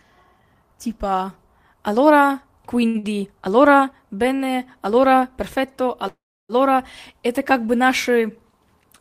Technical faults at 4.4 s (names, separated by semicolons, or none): short stall from a late packet